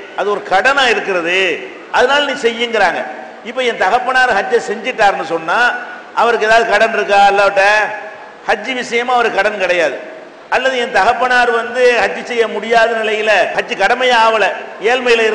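Nothing here calls for comment, since no technical faults turn up anywhere in the audio.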